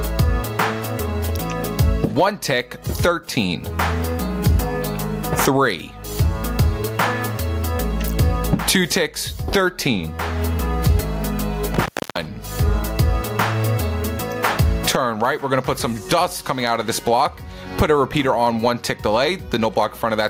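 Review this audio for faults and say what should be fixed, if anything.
Throughout the clip, the level ducks under every loud sound and then recovers, swinging by around 25 dB and squashing the dynamics. This is gain pumping, likely from excessive input gain driving a fast limiter or compressor.

From 11.73 to 12.26 s there is an intermittent contact. The sound breaks up with crackle at the edges and drops out for about 0.31 s while the loose connection opens.

To prevent both, lower the microphone gain so the limiter is rarely triggered, and secure or replace the faulty cable or plug.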